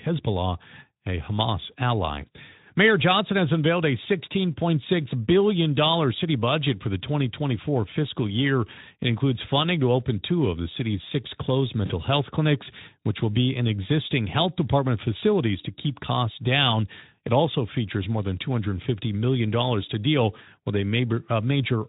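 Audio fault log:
11.86–11.91 s VoIP packet loss concealed by the speech codec: after "the city's six closed", the decoder stretches its last pitch and filter over about 40 ms of missing audio, likely two lost frames, leaving a brief fading buzzy tone or coloured noise.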